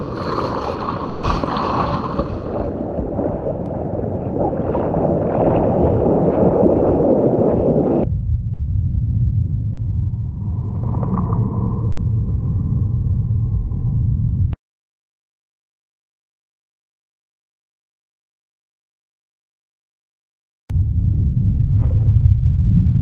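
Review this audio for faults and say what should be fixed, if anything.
Burst of packet loss at 1.09–1.25 s, 8.53–8.61 s and 11.91–11.99 s: the receiver stretched the last sound, fading it, for 140, 60 and 60 ms, then jumped ahead past missing audio.

Short concealed packet loss at 9.73–9.79 s: a 40 ms hole was bridged by extrapolating the preceding sound, leaving a brief smear before the real signal blends back in.

Prevent both by giving the call more network headroom, with forward error correction and a slightly deeper jitter buffer so late packets still arrive in time.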